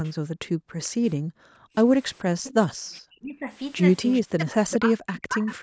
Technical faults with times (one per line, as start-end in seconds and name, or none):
0.05-0.10 echo leak
0.19-1.75 background gated by the echo canceller
0.83-0.89 echo leak
2.19-2.53 echo leak
2.87-3.49 speech suppressed in double talk
4.12-4.73 echo leak
4.23-5.63 speech suppressed in double talk
5.24-5.55 echo leak